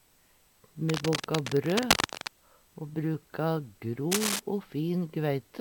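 Cable scratch noise runs from 0.88 to 2.28 s and returns briefly from 4.11 to 4.40 s. Each time, dense, irregular crackling and rustling sits on top of the sound, roughly as loud as the programme itself, so it is hard to ignore. The likely cause is a worn lead, connector or control being disturbed: its contact resistance jumps about rapidly, injecting uneven bursts of noise for as long as the movement lasts.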